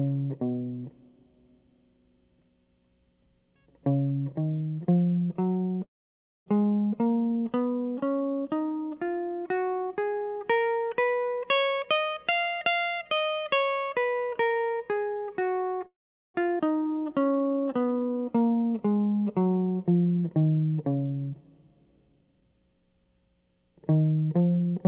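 At 5.84 s, packets were likely delayed in transit long enough for the jitter buffer to run dry, causing a call audio freeze. The receiver stretches the last bit of music into a brief fading buzz, then about 0.59 s of silence, until the audio resumes at 6.48 s exactly where it left off. About 0.62 s of gap has been inserted, and none of the music is lost.

From 11.67 s to 14.28 s, the jitter buffer had built up more delay than it wanted and trimmed it by cutting many short pitch-period slices in a row, a jitter buffer speed-up. Around 0.7 s is removed, so the music plays at about 124% speed while keeping its pitch. The passage sounds rushed, and the beat no longer holds a steady tempo.

A second call audio freeze runs from 15.86 s to 16.36 s. It sounds the same as the first: a short fading tail, then about 0.42 s of silence, with about 0.48 s of delay added in total.

At 16.58 s to 16.61 s, a skip ahead follows. 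Roughly a third of a second of music is dropped, and the material on either side is butted together almost seamlessly, so the playback lurches forward.

Between 16.88 s and 18.33 s, the opposite correction happens as a jitter buffer slow-down. To build up a reserve, the receiver repeats single pitch periods over and over, adding 252 ms. The music drags at about 83% speed at the same pitch, with notes drawn out.

Throughout, the sound has no content above 4 kHz, which fits a G.711 mu-law call path at 64 kbps.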